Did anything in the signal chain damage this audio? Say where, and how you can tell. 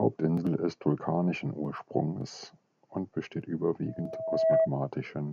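Yes. The damage happens on the analogue side, in the acoustic path where the microphone hears the loudspeaker it feeds. Right after "und besteht", at 3.86 s, a loudspeaker feedback squeal begins. A steady 647 Hz tone swells over roughly 0.7 s until it sits about 10 dB above the speech, then stops at 4.70 s. A single pitch growing on its own is the giveaway. At that frequency the loop gain passed one, so the tone kept feeding itself.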